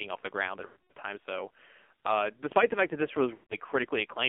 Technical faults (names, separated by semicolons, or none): AMR narrowband mobile codec; lost AMR speech frames